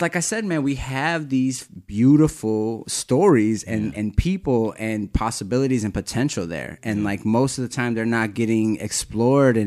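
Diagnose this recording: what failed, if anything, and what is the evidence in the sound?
Nothing failed: no stage from capture to playback leaves any audible trace of a fault in this speech recording.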